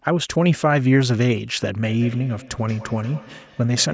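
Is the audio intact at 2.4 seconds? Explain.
No. A feedback echo between two devices runs from 1.83 s to the end. A second device on the same call plays this audio aloud, and the first device's microphone picks it up again. Each sound returns roughly every fifth of a second, about 20 dB below the speech, thinner and ringing.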